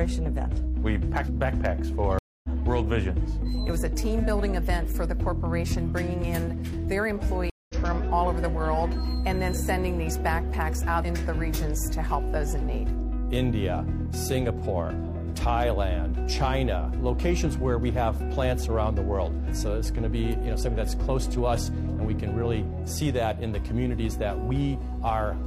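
At 2.19 s and again at 7.50 s, the audio drops into a stream reconnect. The link broke and a fresh decoder restarted mid-stream. Silence lasts 250 ms, then 195 ms. Each time, the sound resumes roughly 150 ms further on, skipping material.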